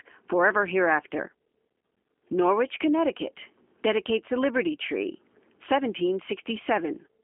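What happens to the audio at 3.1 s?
At 3.1 s the speech carries the same G.729 codec damage heard across the whole clip, not an event at that moment. Each short frame is rebuilt from a vocal tract filter, a pitch predictor and a few pulses, giving a plainly rough, slightly synthetic buzz, with nothing above 3.5 kHz. This points to an 8 kbit/s VoIP link. A simple telephone band filter would only muffle the sound. This has a coarse, manufactured texture.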